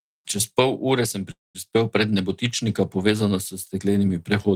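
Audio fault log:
1.31–1.70 s, call audio freeze: the sound stalls and its last moment is stretched into a fading buzz for about 0.23 s before dropping to near silence, likely because delayed packets starved the receiver's jitter buffer. Speech resumes where it stopped, so nothing is lost, but everything after runs about 0.23 s late. A spectrogram shows frozen horizontal bands fading into a dark column. The waveform shows a decaying flat envelope, then a near-empty stretch.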